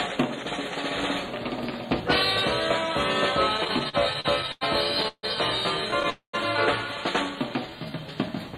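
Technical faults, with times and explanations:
3.57–4.63 s, repeated stalls (stutter): late packets emptied the jitter buffer eleven times, each gap up to 91 ms bridged by continuing the last sound, so playback drags while nothing is lost.
5.08–5.25 s and 6.10–6.35 s, call audio freeze: the sound holds and fades, reaching silence for 60 ms and then 110 ms, likely because held-up packets emptied the jitter buffer. It resumes where it stopped, adding 0.15 s and 0.24 s gaps with nothing missing.
7.36–8.12 s, jitter buffer slow-down: repeated pitch periods or pause fragments stretch this stretch by 83 ms, so it plays at about 90% speed without changing pitch.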